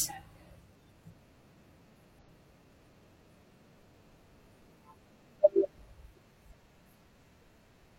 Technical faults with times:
2.19-2.24 damaged data in a compressed stream
4.97 damaged data in a compressed stream
7.99 damaged data in a compressed stream

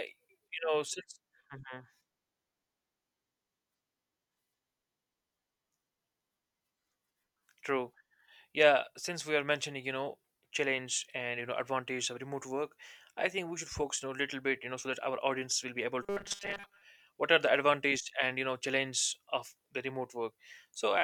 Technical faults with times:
16.03-16.82 robotic sound from repeated short buffers

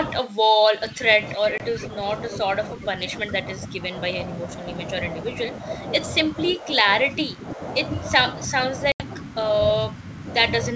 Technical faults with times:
0.21-3.95 speech suppressed in double talk
0.88-1.88 echo leak
1.58-1.61 packet loss on an ADPCM call
5.61-5.65 speech suppressed in double talk
6.29-9.36 speech suppressed in double talk
8.92-9.02 packet loss on an ADPCM call
9.89-10.75 speech suppressed in double talk

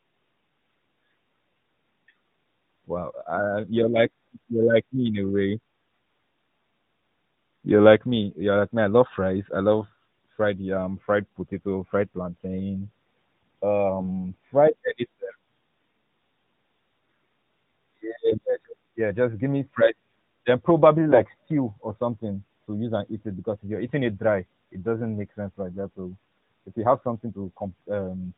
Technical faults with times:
13.96-14.33 AMR bit errors
21.08-21.24 AMR bit errors

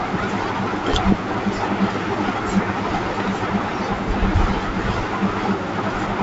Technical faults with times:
none

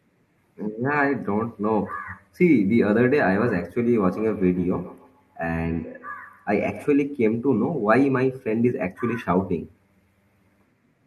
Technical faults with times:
4.15-7.02 feedback echo between two devices

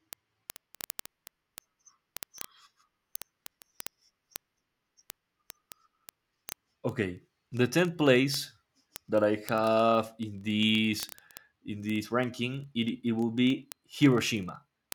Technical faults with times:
0.13-14.92 word clock ticks

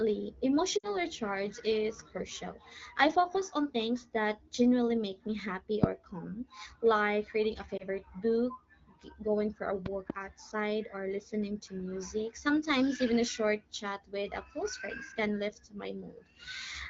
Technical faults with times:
0.77-0.98 lost AMR speech frames
5.83-5.86 loud pop
7.77-7.84 lost AMR speech frames
9.86-10.12 loud pop

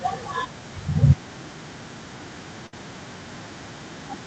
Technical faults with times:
2.66-2.74 burst of packet loss

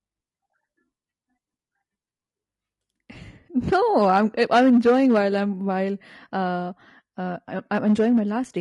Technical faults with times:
0.00-8.60 low-delay AAC compression

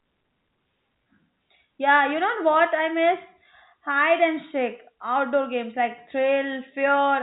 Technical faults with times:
none

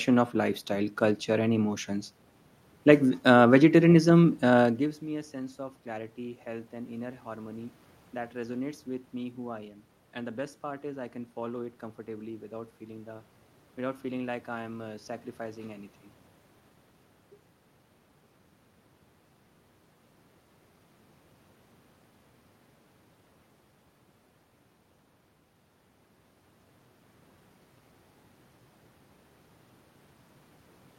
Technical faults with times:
none

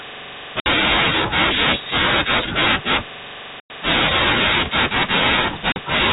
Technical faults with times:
0.60-0.66 packet loss filled with silence
3.60-3.70 packet loss filled with silence
5.72-5.76 packet loss filled with silence

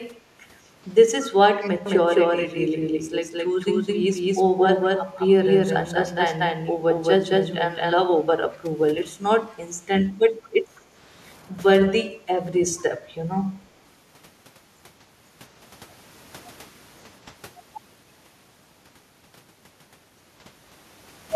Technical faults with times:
1.61-1.69 echo leak
10.43-10.48 echo leak
10.75-10.82 echo leak
12.13-12.26 background gated by the echo canceller

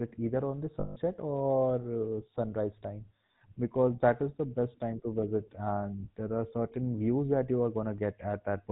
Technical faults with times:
0.00-8.72 GSM full-rate codec
0.80-0.97 lost GSM frames

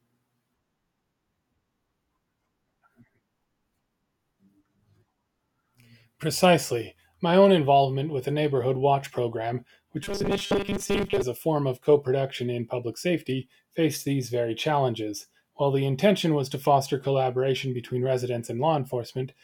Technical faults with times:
10.03-11.24 robotic sound from repeated short buffers

